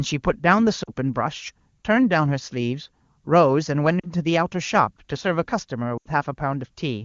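Brief dips to near silence at 0.83–0.90 s, 4.00–4.10 s and 5.97–6.07 s (the most frames lost) come from lost AMR speech frames, which the wideband decoder covers by repeating the last good frame at falling gain.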